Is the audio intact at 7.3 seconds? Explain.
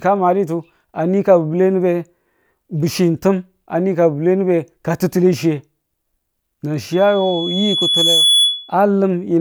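No. At 7.3 seconds the clip is in a loudspeaker feedback squeal running from 6.92 to 8.74 s. A microphone was picking up the loudspeaker it fed, and around 3.4 kHz the loop's gain rose above one, so that frequency kept recirculating and growing on its own. You hear a single high tone that swells over roughly a second and a half, until it sits a few decibels above the speech.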